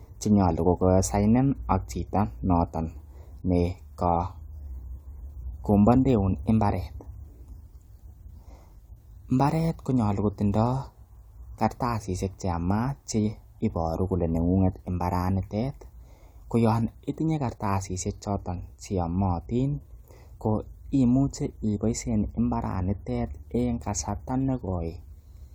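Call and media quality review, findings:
No audible faults found.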